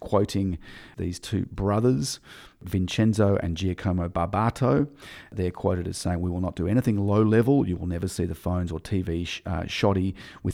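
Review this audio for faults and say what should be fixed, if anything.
No faults; nothing needs fixing.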